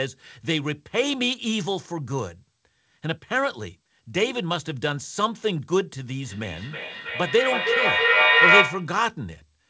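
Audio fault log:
6.24–9.01 s, feedback echo between two devices: the speech returns at a steady interval of about a third of a second, each pass thinner and more ringing, and the repeats build to about 8 dB above the speech. A second device in the room replays this call, and its microphone feeds it back. The local echo canceller ignores sound it didn't play. A single echo fades after one or two returns, but this loop keeps recirculating and grows louder.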